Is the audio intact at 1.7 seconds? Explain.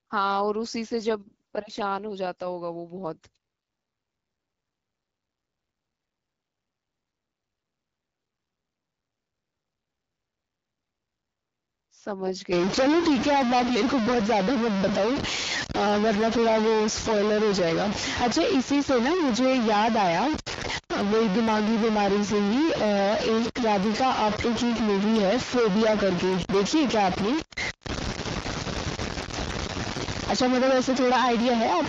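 No. At 1.7 seconds the clip is inside an AMR rate drop that runs from about 0.89 to 2.07 s. The AMR-WB link, running at 12.65 kbit/s, is told to fall back to 8.85 kbit/s, so fewer bits describe the speech while the rest go to error protection. The bandwidth stays the same and nothing drops out, but the speech turns rougher and more synthetic until the rate returns at about 2.07 s.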